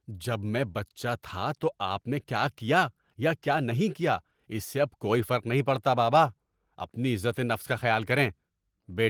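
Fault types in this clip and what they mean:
No faults to flag here; the speech just comes through an ordinary Opus voice stream with the light touch of compression you'd expect from it.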